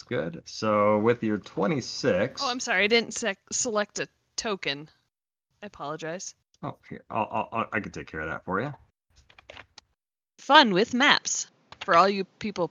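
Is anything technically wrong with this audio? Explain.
Yes. From 10.55 s to the end, the input likely switched to a poorer device: the band stops near 7.6 kHz, the sound dulls, and the level and faint background noise shift, with no gap.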